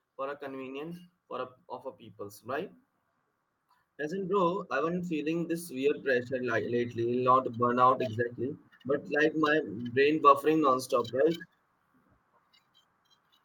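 The automatic gain control judged the speech input too quiet and pushed its gain upward gradually, twice. From 0.15 to 2.77 s it rises by about 5 dB, and from 3.83 to 7.35 s by about 8 dB, the second rise settling just before "burnout exactly". Each automatic gain rising makes the voice and the background noise swell together, so the whole sound grows louder over seconds.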